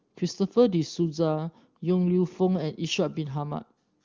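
No technical faults occur at any point in time, with the AMR wideband (HD Voice) codec running at 23.85 kbit/s and leaving at most faint damage.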